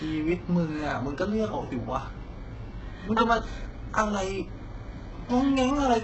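From start to end, the speech shows heavy HE-AAC compression damage, likely from a very low bitrate near 8 kbps. Nothing sounds above 8 kHz. Rebuilt treble makes s sounds gritty and metallic.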